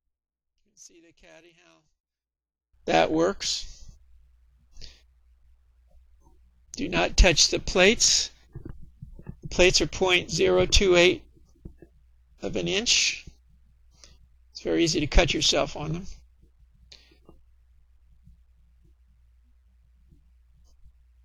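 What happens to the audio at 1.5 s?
At 1.5 s the audio sits inside a stretch of what is likely one channel inverted, running from the start to about 2.74 s. With one side's polarity flipped, whatever the two channels share cancels when they are combined into mono, so the centred material drops away by about 32 dB. What survives is only the small difference between left and right, a faint remnant until the full sound returns at 2.74 s.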